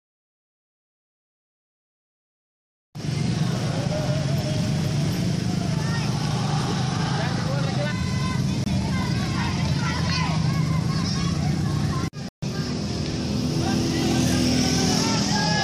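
The audio briefly cuts to silence at 8.64–8.67 s and again for about 140 ms at 12.29–12.44 s, resuming as if it had played on: a likely Bluetooth dropout.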